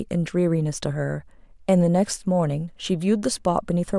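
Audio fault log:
Nothing stood out on listening to the recording.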